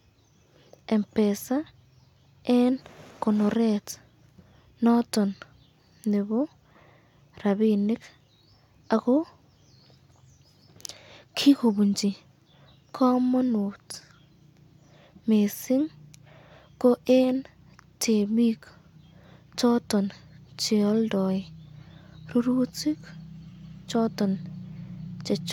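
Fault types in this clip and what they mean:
Nothing stood out on listening to this speech recording.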